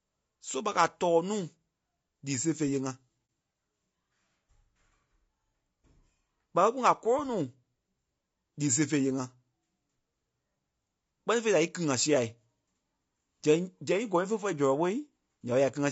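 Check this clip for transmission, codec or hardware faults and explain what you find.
Two faults are present: low-bitrate low-delay coding throughout, and one brief muted dropout.

Low-delay AAC compression runs through the whole speech clip and is plainly audible: the voice sounds rough and grainy, with noise filling the gaps between harmonics and a thin, synthetic upper band. This is likely AAC-ELD at around 32 kbps. Its short frames resolve pitch harmonics poorly and spend bits fast, so the roughness is steady rather than intermittent, which sets it apart from packet loss.

AAC frame loss with muting occurs from 3.26 to 3.29 s, a 30 ms gap. The decoder zeroed the missing spectrum, and the overlapping windows fade the sound out and back in. The result is a brief dip, unlike a hard dropout or a repeated-frame stutter.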